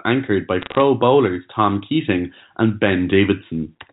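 Right after "anchored by", from 0.61 to 0.81 s, there's a burst of bit errors on a digital phone line: flipped bits in the G.711 stream kick single samples into sharp ticks and crackle.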